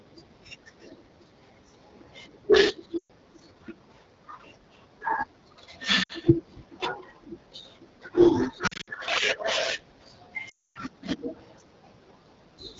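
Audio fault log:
Throughout: AMR wideband (HD Voice) codec at 8.85 kbit/s, one of its two lowest rates. With so few bits, the encoder can describe the pitch pulses and vocal tract shape only coarsely below 6.4 kHz, and the band up to 7 kHz is filled with synthetic noise. The speech comes out plainly rough and raspy, with a grainy, buzzy edge on voiced sounds and a hissy, artificial top end.
2.98 to 3.11 s: lost AMR speech frames. Six consecutive 20 ms frames, 120 ms in all, failed to decode. The decoder kept repeating the last good pitch and vocal tract settings while lowering the gain, so the speech drops to near silence within two frames, which fits wideband concealment. It then comes back briefly weak and rough.
6.03 to 6.12 s: lost AMR speech frames. Three frames in a row, 60 ms, went missing. Here concealment only had to bridge a short gap, so the sound drops to near silence within two frames. 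The level and clarity are restored a moment later, with a weak, rough onset.
8.67 to 8.90 s: lost AMR speech frames. Seven frames, 140 ms in total, dropped out scattered over about 200 ms, with no run longer than 60 ms. Because good frames arrive between the losses, the decoder keeps switching between concealment and real decoding. The speech sounds choppy and warbling, with repeated small dips rather than one fade.
10.49 to 10.78 s: lost AMR speech frames. This is the longest run, 13 frames or 260 ms. Extrapolating from stale pitch and vocal tract settings cannot last that long, and the gain keeps falling. Within two frames the sound drops to near silence and stays there for most of the gap. When decoding resumes, the speech returns weak and rough for a moment.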